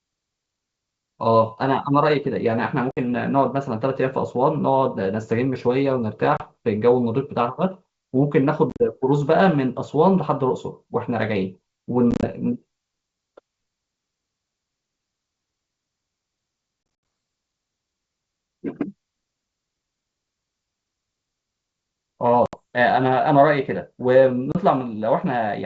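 Speech carried over a wideband G.722 link has packet loss on an ADPCM call at 2.91, 6.37, 8.70, 12.11, 16.83, 22.46 and 24.52 s: hard silent holes, up to 140 ms lost in total at 16.83 s. Unlike ordinary dropouts, the sound then resumes briefly mis-levelled or distorted while the decoder's predictor resynchronises.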